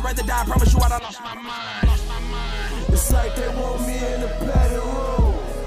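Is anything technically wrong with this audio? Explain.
Yes, there is damaged data in a compressed stream at 0.82 s and from 3.07 to 3.12 s: corrupted bytes make the decoder lose frame sync, producing brief glitches.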